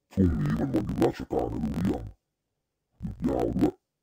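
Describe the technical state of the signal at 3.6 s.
At 3.6 s, as throughout, interleaved audio read as planar splits each 21.77 ms block into half-speed channels, dropping speech an octave, doubled, with a 45.9 Hz chop, yet tempo stays correct.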